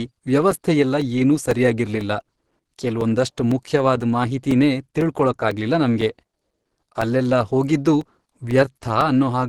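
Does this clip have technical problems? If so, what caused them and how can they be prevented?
Yes. Throughout, the speech sounds hoarse and grainy, with nothing above 12 kHz, likely from Opus compression in its hybrid speech mode at a low bitrate around 16 kbps. Encoding at a higher bitrate prevents this.

From 0.51 s to 9.01 s, regular ticks sound every 0.5 s, about twenty in all. These are periodic USB or driver dropouts, where about 4 ms of audio is replaced by silence each time. Stopping the background task that blocks the bus, or using a larger driver buffer, prevents them.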